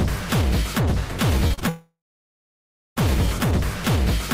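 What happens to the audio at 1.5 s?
Right around there you get short concealed packet loss three times in a row: 1.47 to 1.52 s, 1.54 to 1.59 s, and 1.59 to 1.63 s. Bits of audio arrived too late, so the receiver stretched the preceding sound to cover each gap, which comes across as a quick smeared wobble.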